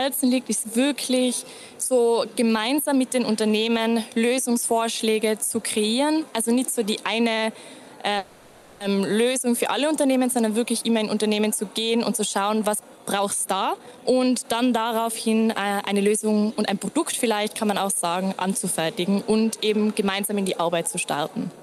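A call audio freeze runs from 8.17 to 8.82 s. The sound does not cut to silence. The last moment is stretched into a buzzy, fading tail for about 630 ms. When the stream resumes, it picks up exactly where it stopped, so nothing is lost and everything afterwards is simply pushed later. That distinguishes it from a packet-loss dropout, which would skip material. The likely cause is delayed packets draining the jitter buffer. From 12.96 to 17.36 s there is a jitter buffer speed-up. The audio plays at about 114% of normal speed, and roughly 0.7 s is trimmed away in many tiny pitch-period cuts, so this stretch sounds hurried. Unlike a resampling or tape-speed error, the pitch stays the same. Only the timing tightens, as the receiver works off a backlog of buffered audio.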